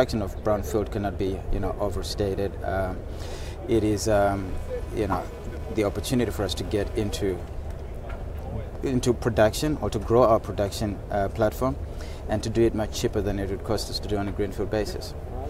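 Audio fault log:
3.73–7.19 s computer activity noise: a buzzy chirp pulsing around 300 times per second, roughly 25 dB below the signal. It follows the computer's activity on the shared ground, not the sound, unlike steady mains hum.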